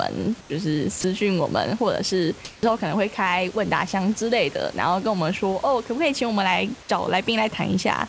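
A speech clip with nothing above 8 kHz, which fits a wideband call codec like G.722, and a little room noise about 23 dB under the speech. At 0.41 to 0.50 s and again at 2.45 to 2.63 s, the real background gives way to comfort noise, flat and featureless and about 3 to 4 dB quieter, likely because the sender's voice detector stopped transmitting during pauses. From 1.01 to 1.04 s, 30 ms of speech is dropped by the voice detector and replaced with that same smooth noise, probably because it mistook a quiet bit for background. At 2.59 to 2.63 s, the onset is clipped by the voice detector: 40 ms of the start is lost, so the speech comes in abruptly, likely because the detector was slow to notice it resuming.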